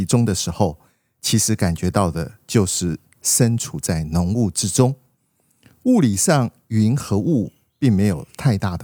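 No technical faults are audible anywhere in this speech recording.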